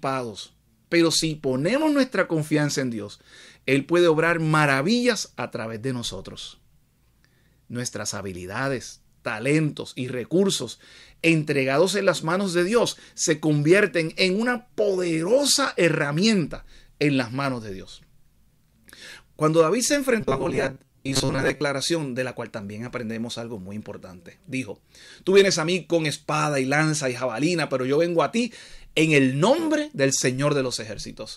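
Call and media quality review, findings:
Robotic sound from repeated short buffers, 20.21 to 21.61 s. The sound goes rigid and metallic, pinned to a steady buzz near 134 Hz. Likely cause is the playout side starving and looping its last chunk. That chunk is about 7.5 ms, which is exactly what sets the 134 Hz drone. Roughly half the real audio in that stretch gets skipped for repeats, so only the rough contour survives.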